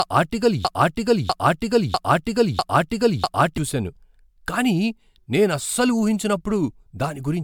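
A speech recording that opens inside a broken-record loop: from 0 s to about 3.58 s, one fragment of roughly 0.65 s plays five times back to back, exactly identical each time, before normal playback resumes. The loop is already running when the audio starts, and the speech that should have filled those first seconds is missing. The likely cause is a player, encoder or stream that stalled and kept resending the last chunk it had buffered. Throughout the whole clip there is also generation loss. The sound is swirly and hollow, with smeared consonant attacks and a layered grainy noise floor, while the bandwidth still reaches about 20 kHz. That combination points to an MP3 at around 134 kbit/s that was likely decoded and re-encoded about seven times. Each pass requantises on a shifted frame grid, so the artefacts pile up well beyond what a single encode at that rate would produce.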